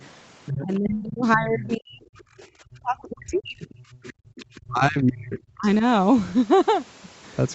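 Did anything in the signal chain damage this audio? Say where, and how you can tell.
Yes, in the call processing. The other side's voice is leaking through at 0.46–0.89 s, about 10 dB down, and fainter at 1.23–1.29 s and 3.72–4.6 s. This is likely leftover loudspeaker echo.

Speech is suppressed in double talk at 0.62–3.69 s and 4.67–5.83 s, dipping by roughly 35 dB. The echo canceller likely mistook the talker for echo.

The background is gated by the echo canceller at 3.97–4.36 s. Room sound drops about 31 dB while the loudspeaker plays, then returns.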